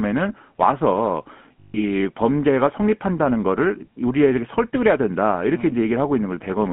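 GSM full-rate coding runs throughout: regular-pulse excitation gives the speech a buzzy, gravelly roughness, with the band confined to roughly 150 Hz to 3.4 kHz, consistent with 13 kbps.

Lost GSM frames from 1.60 to 1.84 s: the decoder repeats the last good frame, holding the sound as a rough, metallic ring that fits about seven missing frames.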